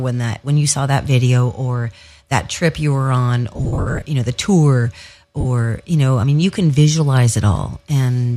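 Between 3.54 and 4.05 s, after "trip you were on" and before "you know the tour", the speech breaks up with lost LE Audio frames. About 360 ms goes missing across 510 ms in short runs of up to about 70 ms. The LC3 decoder fills each gap by replaying the last spectrum with scrambled phase, so the sound turns into a noisy smear rather than dropping to silence or clicking. That smear is what separates it from a plain dropout. A briefer 45 ms loss at 5.41 s, before "you know I mean", smears the same way.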